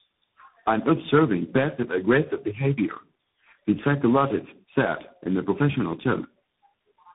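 Tandem speech coding runs throughout: four speech codecs in series, ending in CVSD, leave speech rough, muffled and warbly, with smeared spectrogram harmonics below a hard 3.8 kHz ceiling.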